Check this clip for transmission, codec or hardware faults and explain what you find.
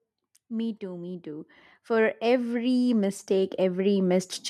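One fault is present. Automatic gain rising runs from 0.27 s to 4.42 s: the gain control judged the input too quiet and lifted its gain steadily, by about 17 dB overall, so speech and background noise swell upward together across the clip.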